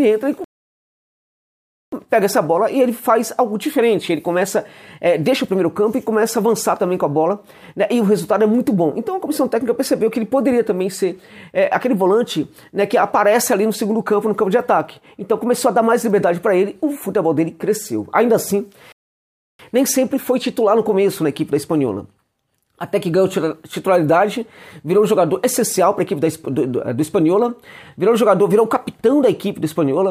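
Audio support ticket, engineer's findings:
Rebuffering stall, two occurrences. 0.44–1.92 s: playback drops to silence for about 1.48 s, then resumes exactly where it stopped. 18.92–19.59 s: same symptom, about 0.67 s of added silence. Probable component: streaming player's download buffer. Mechanism: buffer ran dry before more data arrived, so playback paused until it refilled. No content lost or skipped, only time inserted.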